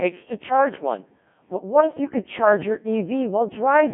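Speech runs through a Codec 2 vocoder throughout, sounding robotic and buzzy, rebuilt from sine waves. Damage is heavy, nothing above 3.6 kHz, fitting about 1.6 kbit/s.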